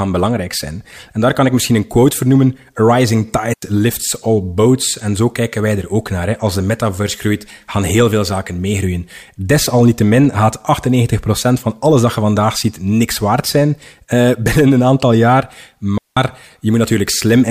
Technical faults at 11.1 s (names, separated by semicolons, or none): none